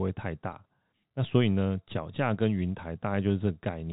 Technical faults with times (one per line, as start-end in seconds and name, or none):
none